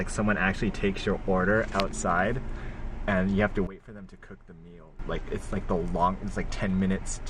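At 3.67 s the level drops abruptly by about 17 dB, with the sound and its background noise falling together in a single step rather than fading, which marks a sudden gain jump. It stays at the reduced level until 4.99 s, then returns just as abruptly. The likely cause is a digital gain setting, or an equivalent bit shift, being applied and later removed between one sample and the next without any ramp.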